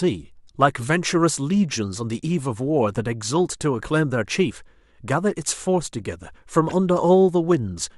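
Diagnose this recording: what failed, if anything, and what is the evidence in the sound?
The codec stage failed with a corrupt frame decoded. Brief glitches occur at 0.80 to 0.83 s and 6.69 to 6.74 s, at about -25 and -15 dBFS. Flipped bits misled the decoder. It still played each damaged frame, placing energy at wrong frequencies.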